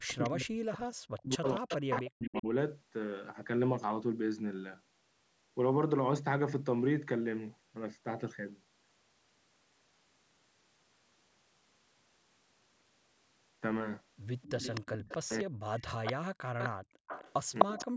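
Speech suppressed in double talk runs from 0.0 to 2.47 s. The voice repeatedly dips by as much as about 40 dB, for roughly 2 s in total. The likely cause is an echo canceller that could not separate the near talker from loudspeaker echo while both sides spoke, so it turned everything down.

An echo leak at 0.10 to 0.29 s adds a faint copy of the voice delayed by 256 ms, about 20 dB below the speech. The likely cause is loudspeaker pickup that the far end's canceller failed to remove, so it was sent back. A stronger leak at 1.45 to 2.39 s has the same 256 ms delay and sits only about 5 dB down, so it is clearly audible as a lagging double.

Another echo leak from 14.42 to 15.17 s is about 10 dB under the speech. Suppression returns at 15.24 to 15.63 s, cutting roughly 0.3 s of voice by up to about 40 dB.

From 15.78 to 17.85 s a long echo leak trails the voice at about 5 dB down. Within it, background gated by the echo canceller empties the room sound at 16.71 to 17.07 s, dropping it by about 33 dB for roughly 0.4 s before it returns.

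Double-talk suppression hits again from 17.64 s to the end, taking about 40 dB out of the last 0.3 s.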